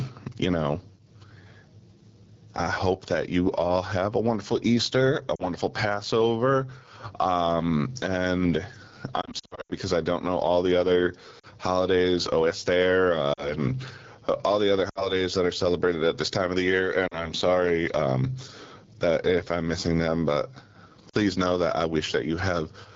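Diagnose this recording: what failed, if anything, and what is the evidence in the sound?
At the call-processing or capture stage, the input gain was most likely set far too high and a fast limiter is clamping it on every loud syllable. The result is gain pumping across the whole clip, with a swing of about 25 dB. Loud and quiet passages sit squeezed together, and the sound is flattened.

At the codec stage, the speech has passed through the AMR wideband (HD Voice) codec at one of its lowest rates, which fits 8.85 kbit/s. At that rate the pulse-driven vocal tract model has too few bits to track the voice cleanly. Throughout the clip the speech is rough and raspy rather than clear. The top band, from 6.4 to 7 kHz, is filled with shaped noise.

On the radio or network side, lost AMR speech frames failed their checksum, and the decoder bridged each gap by reusing the last good pitch and vocal tract settings with falling gain. 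Brief dips or warbles of about 40 to 60 ms fall at 5.35–5.45, 11.39–11.46, 13.33–13.54, 14.90–15.11, 17.07–17.30 and 21.09–21.16 s. The worst stretch runs from 9.21 to 9.72 s, where repeated losses, the longest about 80 ms, drop the speech toward near silence before it returns weak and rough.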